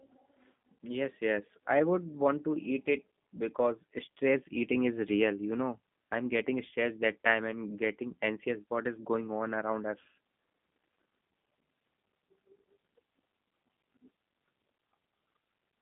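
Speech, and it's been through a G.729 codec the whole way: nothing survives above 3.6 kHz, the lows thin out below 150 Hz, and the voice has that rough, synthetic edge from being rebuilt out of a vocal tract filter and a few pulses per frame, which fits an 8 kbit/s stream.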